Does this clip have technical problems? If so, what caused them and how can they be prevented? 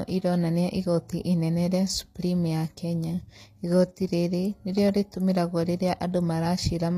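Yes. The sound was likely squeezed through HE-AAC compression, which codes only the lower spectrum in full and rebuilds the treble by copying lower bands upward under a coarse envelope. That leaves bright but synthetic highs whose harmonics don't line up with the body of the speech, so s sounds come out gritty and lispy across the whole clip, with nothing above 14.9 kHz. The damage is plainly audible, which fits a stream of about 24 kbps. To prevent it, use a higher bitrate or plain AAC, or a codec without band replication for speech.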